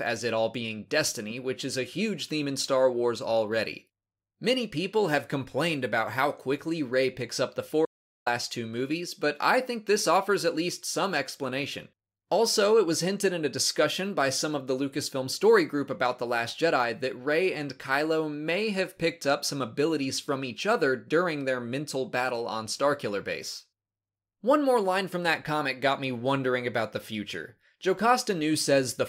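The audio cuts to silence from 7.85 s to 8.26 s, an audio dropout to silence lasting about 410 ms, with no room tone in the gap and whatever occurred there lost. The likely cause is a brief loss of input, such as a disconnected device or momentary mute, while recording continued writing silence.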